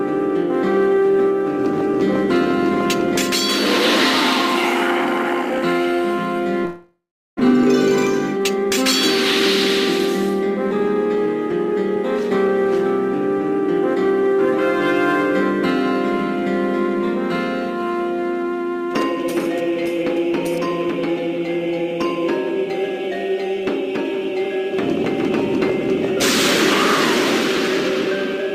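From 6.65 to 7.41 s the audio breaks off: the last sound is drawn out into a buzzy tail that fades, leaving about 0.37 s of silence before sound returns with roughly 0.6 s of material simply gone. The pattern points to a likely long network dropout. No audio reached the receiver, so its concealment extended the final sound for about 0.74 s before giving up. Playback then resumed further on, with the timing shifted by around a tenth of a second. From 10.77 to 12.65 s the audio runs slightly fast, about 3% quicker at unchanged pitch. This is a jitter buffer speed-up. Having built up more audio than its target, the receiver trimmed many short pitch-period-sized slices in quick succession, cutting around 70 ms in total to bring the delay back down.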